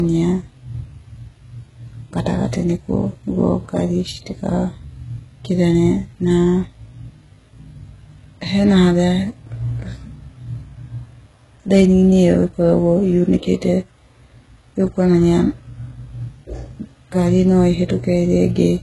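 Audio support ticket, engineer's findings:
Low-bitrate audio saved at a high bitrate, whole clip. Speech carries first-encode artefacts at odds with the file's high bitrate. Spectrogram: hard ceiling, nothing above 11.5 kHz. Likely cause: earlier very-low-bitrate encode, which fits HE-AAC near 12 kbit/s, later re-encoded to MP3 near 250 kbit/s. Second pass adds size, cannot restore removed content; artefacts and ceiling carry through.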